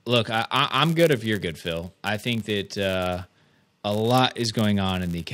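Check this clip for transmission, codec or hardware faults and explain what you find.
One fault runs through the whole speech clip.

Block size mismatch (padded), throughout: one stage hands over blocks slightly shorter than the next stage expects, and the shortfall in each block is filled with zeros. The result is a tiny silent gap repeating 99.6 times per second, heard as a steady buzz at 99.6 Hz under the speech. The inserted gaps also stretch the timeline, so the speech runs at 0.996 of normal speed while its timbre stays.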